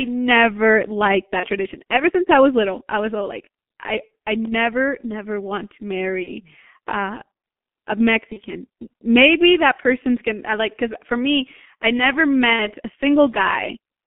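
Throughout the speech, the G.723.1 codec at 6.3 kbit/s confines the sound to roughly 250 Hz to 3.4 kHz and heavily damages it. The result is muffled and hoarse, with smeared consonants. The hoarse grain, from its slowly updated voice model, sets it apart from plain band-limiting.

VoIP packet loss concealed by the speech codec occurs at these points:
1.40–1.46 s, after "never liked"
4.07 s, between "was all like I" and "I never never want"
6.23–6.30 s, after "never never want to"
8.33–8.41 s
12.53–12.67 s

Each gap fits one lost 30 ms frame, except the last, which fits two. The decoder extends the previous sound into a fading buzz rather than leaving a silent hole or click, which distinguishes concealment from a plain dropout.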